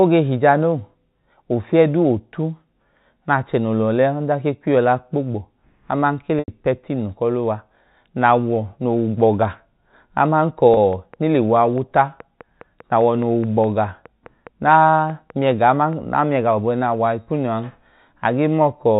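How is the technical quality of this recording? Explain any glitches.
The recording has two kinds of glitch: two short dropouts patched by packet-loss concealment, and a long run of regular clicks, all heard over telephone-band audio from G.711 coding that cuts everything above 4 kHz.

Packet loss with pitch repetition occurs from 6.39 to 6.48 s and again from 10.74 to 10.77 s. Audio packets failed to arrive, and the receiver filled each gap by repeating the last pitch period of the speech. The first gap lasts 90 ms, which fits three 30 ms packets, so the repeated cycle is drawn out longer and fades. The second lasts 30 ms, about one packet, and sounds like a brief buzzy hold on the sound.

A train of clicks begins at 10.93 s, just after the second dropout, and continues to 16.14 s. About thirty evenly spaced pulses arrive at 4.8 per second, each roughly as loud as the speech itself. The likely cause is electrical interference or a faulty connection or power supply injecting the same pulse repeatedly into the signal. 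It is heard as a steady ticking laid over the speech and through its pauses.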